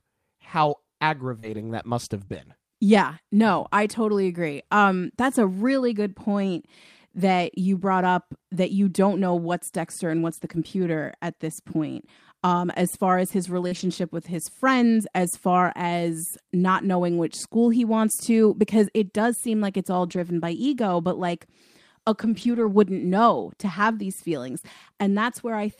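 Short concealed packet loss at 1.39 to 1.45 s, 2.25 to 2.29 s and 13.67 to 13.73 s, each about 20 to 40 ms of missing audio: the receiver extended the preceding sound to bridge the hole, heard as a brief smear or wobble. On a spectrogram the harmonics stretch flat or turn to diffuse noise before snapping back.

Each of those gaps runs straight into a lost packet rebuilt from error correction, at 1.43 to 1.69 s, 2.29 to 2.35 s and 13.71 to 13.81 s, with further stretches at 10.29 to 10.55 s, 20.07 to 20.21 s and 22.21 to 22.67 s, the longest. Low-bitrate backup copies carried in later packets stood in for the lost ones, so nothing drops out, but these passages sound rougher and grainier. On a spectrogram they show as patches of coarser, noisier texture with no gap in the waveform.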